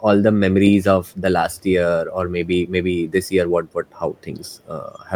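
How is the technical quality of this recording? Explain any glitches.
Two brief echo leaks are audible near the end of the speech. From 3.93 to 4.24 s and again from 4.43 to 4.68 s, a faint copy of the speech returns 362 ms late, far below the main level. It is likely an echo canceller letting loudspeaker sound back into the microphone.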